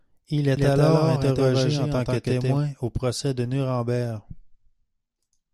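From 0.57 to 2.57 s a doubled audio track appears: a same-level copy trails by roughly 150 ms, likely from a second, slower capture path, showing as spectrogram patterns repeated a short step later.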